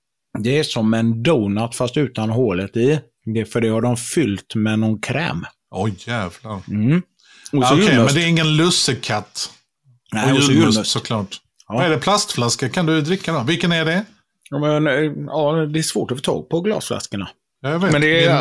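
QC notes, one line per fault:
No faults heard in review.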